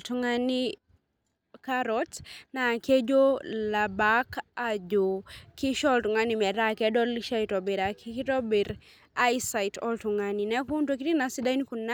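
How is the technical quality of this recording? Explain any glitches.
Nothing here needs explaining, since the recording has no glitches to point out anywhere along the way.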